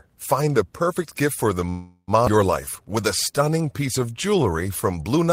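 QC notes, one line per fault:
1.69 to 2.11 s, call audio freeze: the sound stalls for about 0.4 s, trailing off into a fading buzz or hiss with a short silence. Likely late packets draining the jitter buffer; nothing's lost.
2.26 s, skip ahead: playback jumps forward with barely any gap, roughly a fifth of a second of speech gone, the two sides butted straight together.
2.61 to 4.51 s, jitter buffer slow-down: speech drags to 89% speed at unchanged pitch, about 0.22 s added by repeating pitch periods, so sounds stretch.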